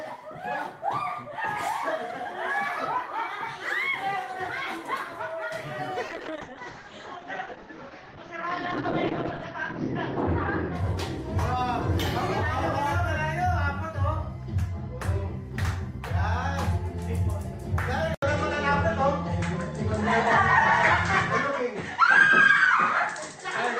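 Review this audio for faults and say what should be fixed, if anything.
From 6.09 to 11.29 s there's a call bitrate drop. The top end shrinks from full band down to 6 kHz and the sound turns rough and watery, worst for about 3.6 s, which fits the encoder being squeezed from 32 to 8 kbps. A sensible minimum bitrate and steadier bandwidth estimation would prevent it.

At 18.14 s there's an 80 ms gap, then everything after it sounds duller and boxier, with nothing above 8.4 kHz, a level shift of roughly 5 dB and a new, faint noise floor. That's likely an input switched to a poorer device. Locking the input device for the session would stop it.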